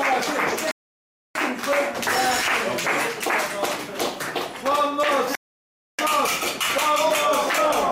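Two rebuffering stalls, at 0.71–1.35 s and 5.35–5.99 s: playback starves, drops to silence for about 0.64 s, then resumes exactly where it stopped, losing nothing.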